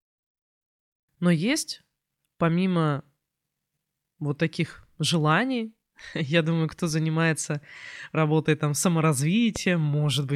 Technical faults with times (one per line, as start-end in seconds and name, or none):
9.56-9.58 loud pop